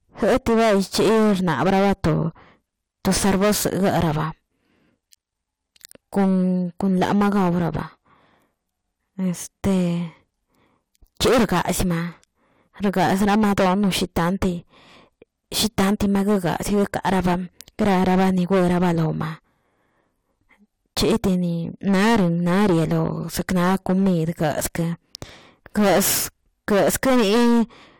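The speech is hard clipped for its whole length: every loud syllable is driven roughly 20 dB beyond what the stage can pass, so about a tenth of the samples are sliced flat at the ceiling. Those squared-off peaks spray harmonics high into the spectrum, heard as a harsh, buzzy fuzz riding each louder stretch. Soft saturation would round the peaks and sound warmer; here the edge is abrupt and gritty.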